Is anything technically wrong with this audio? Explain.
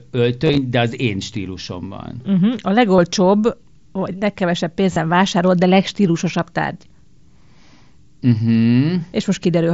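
Yes. Concealed Bluetooth headset packet loss: headset voice packets dropped, and the phone patched each gap with a looped slice of recent waveform. This causes a brief buzzy flutter at 0.45–0.58 s before "de az én stílusomban", at 2.96 s, and at 4.93–4.96 s between "vagy legkevesebb" and "vásárolt de legstílusosabb".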